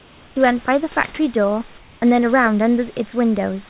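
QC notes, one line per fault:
0.00–0.36 s and 1.78–2.02 s: comfort noise in place of the background. The sender likely stopped transmitting during these speech pauses, so the receiver filled 360 ms and then 240 ms with synthetic noise. The real room background turns into a steady, featureless hiss about 1 to 2 dB quieter.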